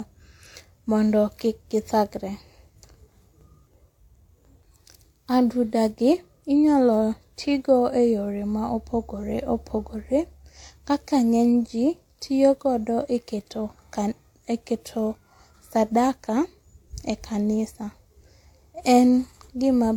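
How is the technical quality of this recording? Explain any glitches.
The technical quality is limited by one fault that runs through the whole recording. Throughout, the speech carries the artefacts of two codecs heard together, and the sound above about 18.4 kHz is missing entirely. The likely cause is transcoding between lossy codecs: a low-rate HE-AAC-style encode, possibly around 40 kbit/s, then re-encoded with WMA 1, possibly around 96 kbit/s. The second codec spends bits reproducing the first codec's artefacts and adds its own artefacts. On a spectrogram, energy stops at a hard shelf near 18.4 kHz, and the upper bands look patchy and blocky.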